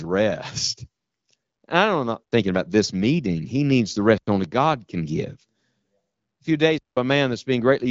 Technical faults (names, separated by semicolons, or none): block of digital silence